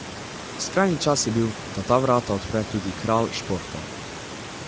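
From start to finish the speech carries Speex codec damage, plainly audible as a hoarse, grainy roughness. Too few bits for the excitation leave the voiced sound noisy, which fits a middle setting of about 17 kbps. On a spectrogram, harmonics look smeared and the 4 to 8 kHz band shows only shaped, noise-like fill, cut off sharply at 8 kHz by the call's microphone processing, over room noise about 15 dB below the speech.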